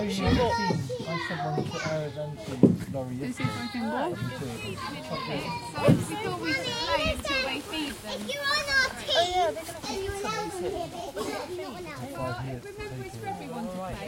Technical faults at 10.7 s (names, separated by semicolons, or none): none